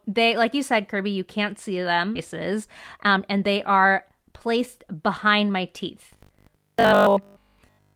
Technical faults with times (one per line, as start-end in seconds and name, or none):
2.15-2.17 skip ahead
2.25-5.51 jitter buffer speed-up
6.13-7.95 robotic sound from repeated short buffers